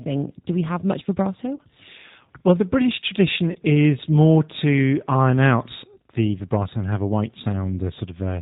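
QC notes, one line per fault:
Throughout: G.729 codec. The sound is band-limited with nothing above 4 kHz and has a slightly rough, synthetic grain, which fits an 8 kbit/s G.729A encoding. This codec does not transmit the waveform itself. It rebuilds each 10 ms frame from a vocal tract filter, a pitch predictor and a handful of pulses. That sparse excitation leaves the speech intelligible but plainly processed.
1.56–1.61 s and 3.52–3.57 s: VoIP packet loss concealed by the speech codec. The first dropout comes right after "do we have much" and the second just before "is more to iron". Each gap is about 30 ms, which points to a single lost packet. During each gap the decoder keeps repeating its last pitch and filter settings at falling gain, so the speech smears out and fades. Because each frame is predicted from the previous one, the speech stays weak or distorted for a short stretch after the packets resume.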